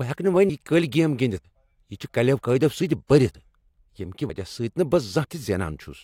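At 1.44 s, 3.34 s and 4.29 s the speech jumps forward abruptly, as if a small slice of roughly 50 ms has been cut out and the two sides butted together with no gap. This is audio missing between chunks, likely from a recorder or processor handling the signal in 1-second blocks and dropping a short stretch each time it closes one block and starts the next.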